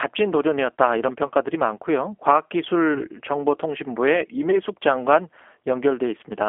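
Speech, carried throughout by the G.729 codec. The sound is confined to roughly 300 Hz to 3.4 kHz and has a plainly rough, synthetic texture, consistent with 8 kbit/s coding that rebuilds the voice from a vocal tract filter and sparse pulses rather than the actual waveform. VoIP packet loss concealed by the speech codec occurs at 1.27 to 1.31 s, 2.94 to 3.03 s and 4.51 to 4.61 s. Each gap sounds like about 20 ms of missing audio, which fits one lost packet. The decoder fills each gap by extending the preceding pitch and filter into a buzzy tone or coloured noise that fades, and the voice stays weak or distorted for tens of milliseconds or more past each gap while the decoder's frame-to-frame state recovers.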